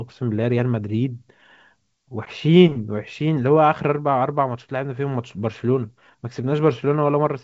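Nothing's wrong with this speech recording; it comes across as ordinary G.722 wideband telephone audio at 64 kbit/s, with the content stopping around 7.8 kHz as that coding does, and there's nothing to flag.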